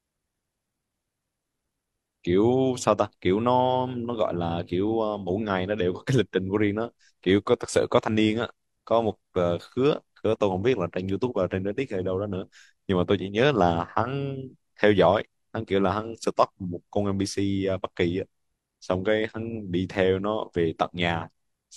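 Speech recording, no audible technical faults anywhere in the clip.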